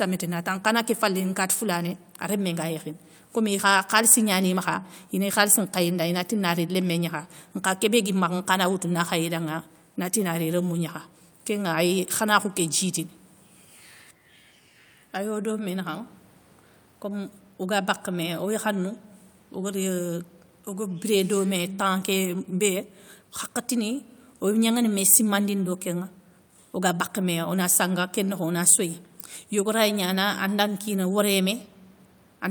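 No technical faults are audible.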